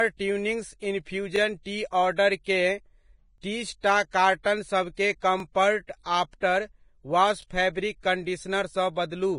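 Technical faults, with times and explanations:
Throughout, Vorbis compression: the speech is hissy and grainy, with nothing above about 10.6 kHz and roughened, blurred detail. The likely cause is a low-bitrate Vorbis encode, around 28 kbps, quantising the treble so coarsely that fine detail turns into noise of similar energy.
1.36, 3.38, 5.40 and 7.42 s, overlapping chunks: a short click or stutter every 2 s, the last just after "आफ्टर वॉश". Each chunk starts 20 ms before the previous one ends, so that sliver of audio plays twice at each join.
2.44, 4.11, 4.43 and 6.03 s, pre-echo: sharp onsets are preceded by a brief hiss lasting 19 to 29 ms, the last just before "आफ्टर वॉश फैब्रिक". The codec spreads quantisation noise across the whole transform block, filling the quiet moment before each attack and smearing it.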